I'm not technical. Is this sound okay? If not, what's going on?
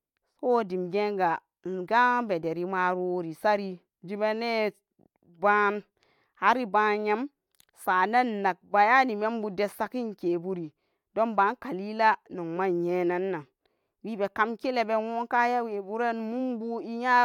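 Yes, the recording is technically sound, with no audible faults anywhere in it.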